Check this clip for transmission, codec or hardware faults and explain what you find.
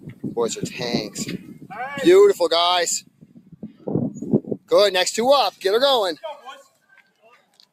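The main problem is a speech-oriented noise suppressor that was left running on material it wasn't built for. Across the whole clip it keeps mistaking sustained and ambient parts of the sound for noise and pulling them down, with the gain swinging by roughly 15 dB. Attacks slip through while anything held or decaying sinks, so the sound pumps and thins out rather than sitting at a steady level. It's a noise suppressor applied to music or sounds, basically.

The specific dips, where the sound is cut by the noise suppressor, land at 0.00–0.32 s (about 14 dB down), 1.07–1.22 s (about 12 dB), 1.38–1.73 s (about 14 dB), 3.01–3.87 s (about 14 dB) and 6.65 s to the end (about 13 dB, the longest stretch). In each one the suppressor took the sound for noise, so the level sinks there.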